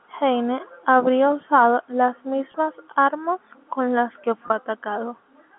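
Speech over a G.711 telephone line, band-limited to roughly 200 Hz to 3.5 kHz. Two brief packet losses with pitch repetition occur, at 2.52 to 2.54 s and 4.48 to 4.50 s. Each gap matches a single lost 20 ms packet. The receiver fills it by repeating the last pitch period, so each moment sounds slightly held and buzzy.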